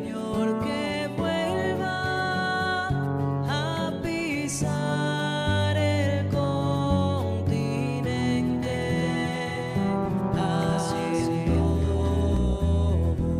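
The audio carries a doubled audio track from 8.6 s to 12.4 s. A second full-band copy trails the original by roughly 0.4 s, about 5 dB quieter, with no decay or room colour, and it cuts in and out abruptly. On a waveform, each burst is followed by a smaller identical burst; a spectrogram shows the same patterns repeated, shifted right. The likely cause is a slower capture path or an edit that left two misaligned copies.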